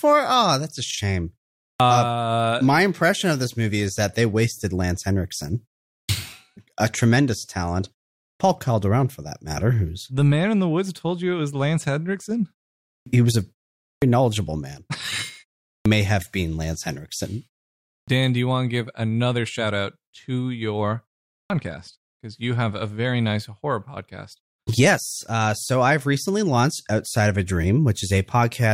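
An output device that sleeps through short silences, clipped start after a pause, wakes too slowly after gaps of 0.42 to 0.59 s. Speech then begins abruptly, missing its first 69 to 81 ms. This happens at 1.73 s after "that's a shame", 6.02, 8.32, 12.99, 13.94 (before "knowledgeable man"), 15.78, 18.00 and 21.42 s after "shout out to your".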